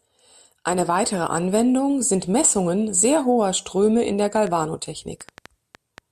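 From 4.37 s to 5.99 s, just after "in der", a train of clicks runs over the speech. About seven short pulses arrive at roughly 4.3 per second, spaced unevenly. Each has much the same sharp shape. They peak around 5 dB above the speech, so they cut through clearly as ticking and popping. They keep going in the gaps between words. The likely cause is interference from nearby equipment or a faulty connection or power supply injecting repeated pulses.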